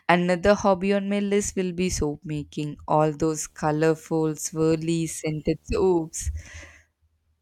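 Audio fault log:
3.39 to 6.45 s, video or display buzz: a faint buzz at 75 Hz with a thin hash riding above it sits well under the speech. That's a screen or its video cable leaking into the audio path at the display's field rate.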